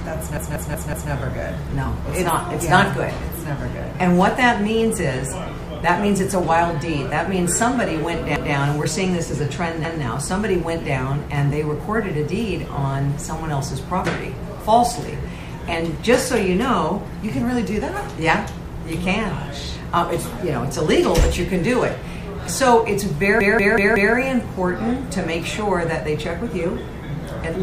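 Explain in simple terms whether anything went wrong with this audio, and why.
A short slice of sound, about 0.19 s long, stutters: it plays over and over with a hard join each time. That happens four extra times from 0.37 to 1.12 s and again from 23.41 to 24.15 s, and once more at 8.36 to 8.55 s and 9.85 to 10.03 s. This is a repeated buffer. Fresh audio arrived late, so the player replayed its last chunk, which fits an 8192-sample buffer, until new sound came.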